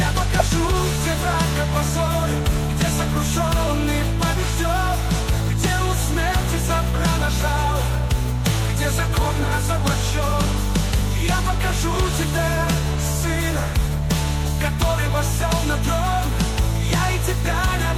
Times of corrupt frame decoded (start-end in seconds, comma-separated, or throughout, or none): 0.39